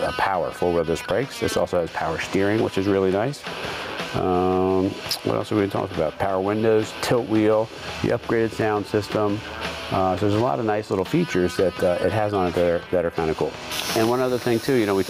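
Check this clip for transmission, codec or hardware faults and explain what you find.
One fault is present, and it runs through the whole clip: gain pumping. The gain swells back up between loud sounds and ducks by around 15 dB under each one, unlike a noise gate, which cuts to silence. The likely cause is input gain set far too high with a fast limiter clamping it.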